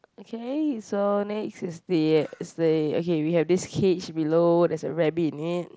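No technical faults can be heard in this speech recording. It comes through a Bluetooth mSBC headset link, which caps the bandwidth at 8 kHz and leaves a light graininess on the louder moments.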